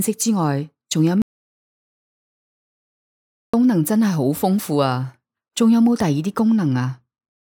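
At 1.22 s the sound cuts to total silence with no room tone until 3.54 s. This audio dropout to silence likely came from a lost input.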